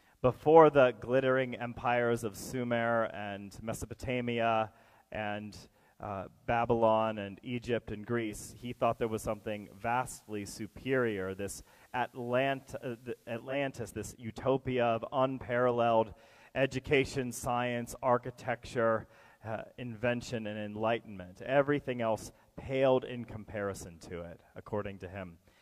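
At 8.2 s the receiver loses its digital signal and performs a digital radio blending to analogue, cross-fading over about 0.28 s to the station's FM broadcast. From there until 13.6 s the audio carries a steady hiss, roughly 40 dB below the programme. At 13.6 s the digital stream returns, the receiver blends back, and the hiss drops away. The level holds steady across both blends.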